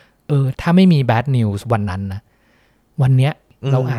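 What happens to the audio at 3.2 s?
Nothing goes wrong at 3.2 s; the speech plays through that point intact, with no dropout, click or distortion.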